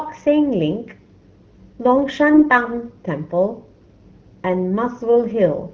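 From 2.34 to 2.50 s the speech turns hoarse, scratchy and gargly. These are AMR bit errors. About a tenth of the weakly protected bits arrived flipped, which misplaced the excitation pulses and skewed fine pitch, gain and spectrum values. The span fits roughly seven 20 ms frames of a wideband HD Voice stream.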